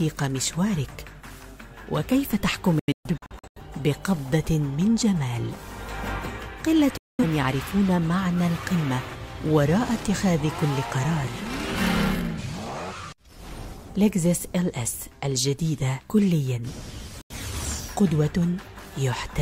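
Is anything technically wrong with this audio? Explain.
Yes, there's digital broadcast dropout at 2.79–3.60 s (several short holes, longest about 128 ms), 6.97–7.24 s and 17.21–17.35 s. The receiver muted on bad frames, so the sound snaps to silence with a 3 ms fade and returns with that stretch gone.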